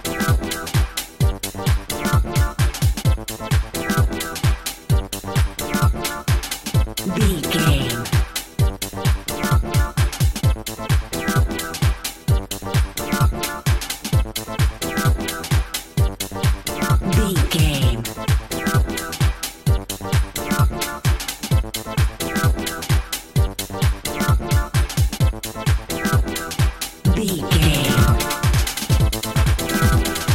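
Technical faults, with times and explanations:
27.62 s to end, doubled audio track. A second full-band copy of the sound joins abruptly, roughly a tenth of a second behind and at about the same level. It has no decay or room colour. Likely cause: a slower second capture path mixed in.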